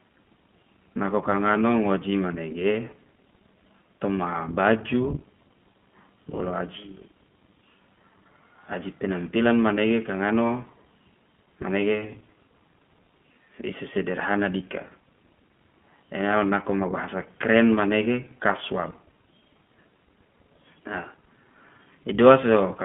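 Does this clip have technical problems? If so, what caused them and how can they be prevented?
Yes: iLBC codec coding throughout, with nothing above about 3.4 kHz and a rough, synthetic edge, which fits its 20 ms, 15.2 kbps mode; a spectrogram shows a hard ceiling there. Prevent it by sending or recording through a wideband codec instead.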